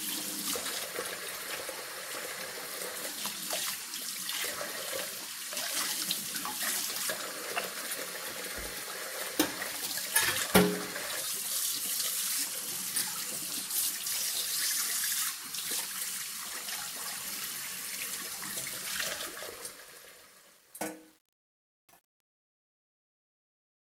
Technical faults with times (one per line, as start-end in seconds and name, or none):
19.04-23.81 truncation distortion on a fade